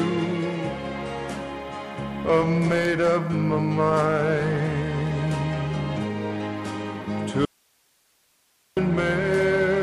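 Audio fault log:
7.45–8.77 s: audio dropout to a faint residue, 1.32 s lost abruptly, only hiss near -40 dB remains, likely a broken input path; waveform collapses flat, spectrogram shows broadband noise floor.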